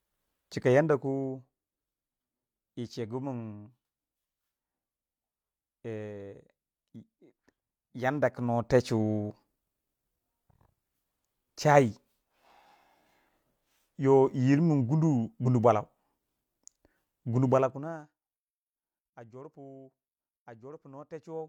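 From 0.56 to 1.49 s the speech level falls by roughly 10 dB, and the fall arrives as a series of discrete steps, around twenty per second, with no smoothing between them. Each jump in gain puts a small discontinuity into the waveform, so a fine ticking rides on the speech for the duration of the fade. This is zipper noise.

At 15.42 s the speech lurches forward by about 40 ms. This is a case of compressed frames skipped. A single coded frame has been dropped, either missing from the stream or rejected by the decoder as damaged. The size of the jump fits a frame length of about 42.7 ms.

From 17.45 to 18.22 s a second fade produces zipper noise again. This one is deeper, roughly 25 dB, and is made of increments of about 1 dB at around twenty per second.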